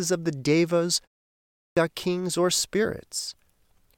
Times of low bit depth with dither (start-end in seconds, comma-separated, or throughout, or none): none